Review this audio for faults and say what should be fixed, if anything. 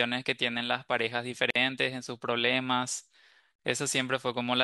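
Pieces about 2 s long were encoded separately and joined untrimmed, leaving encoder delay and last-frame padding in place. This gap at a join of encoded pieces silences the speech from 1.50 to 1.56 s (about 50 ms) and from 3.56 to 3.59 s (about 38 ms), with smeared edges before the speech resumes where it stopped. To prevent it, trim each piece's encoder delay and padding before joining, or encode the whole recording in one continuous pass.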